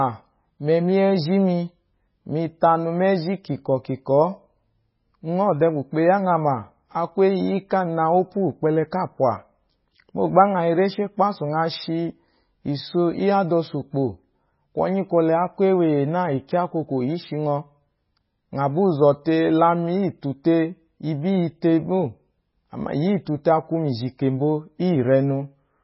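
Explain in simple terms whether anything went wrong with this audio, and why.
MP3 compression damage runs through the whole speech clip, from start to finish, and heavy MP3 compression is the likely cause. To save space, the encoder kept only what it judged most audible. It dropped everything above about 5.5 kHz, so the voice sounds dull and muffled, with soft s sounds. It also threw away quieter details that flicker in and out from moment to moment, giving the sound a watery, swirly quality.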